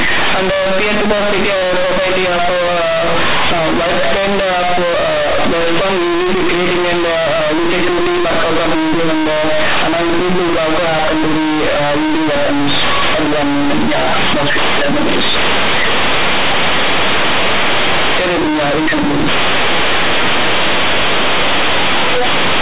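This is a speech clip marred by companded audio read as linear throughout. The mu-law bytes are played as plain 8-bit samples without expansion. Every sign change swings the output across half its range. Quiet passages become as loud as speech. The result is harsh, buzzy distortion with heavy noise in the pauses. The G.711 coding limits the audio to the telephone band below 4 kHz.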